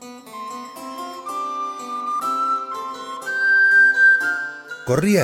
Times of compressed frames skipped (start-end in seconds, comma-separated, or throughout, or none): 2.19